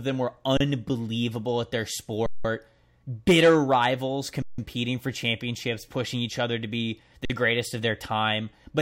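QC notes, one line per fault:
0.57–0.60 s, 2.26–2.45 s, 4.42–4.58 s, 7.25–7.30 s, underrun with held sample: after "them were", "at their" and "bitter rivals" (resuming "for championships pushing each"), and once more at 7.25 s, the speech freezes on a flat level lasting 32, 186, 160 and 46 ms. The longest fits an 8192-sample buffer. No speech is lost, so it resumes softly where it stopped.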